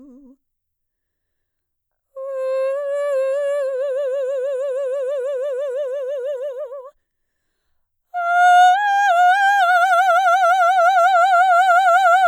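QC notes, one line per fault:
No faults heard in this music.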